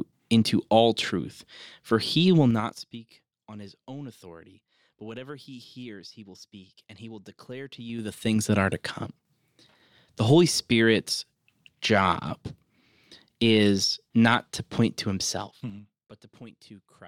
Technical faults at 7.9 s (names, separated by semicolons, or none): zipper noise